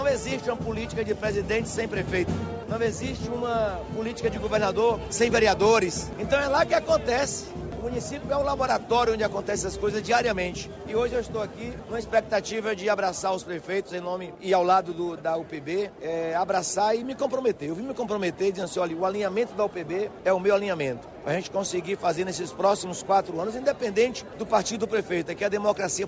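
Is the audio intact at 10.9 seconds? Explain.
Yes, the audio is intact at 10.9 seconds, with no dropout, click, distortion or other fault to be heard at that point.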